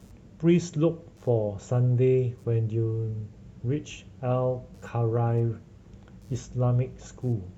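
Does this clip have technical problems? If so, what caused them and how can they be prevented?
Yes. Computer activity noise runs throughout the speech: a faint buzzing chirp pulsing at around 100 Hz, roughly 45 dB below the voice. Processor and graphics load shifts disturb the shared audio ground. On a spectrogram it appears as evenly spaced vertical striations persisting through pauses. To prevent it, record through an isolated external interface or add a ground-loop isolator.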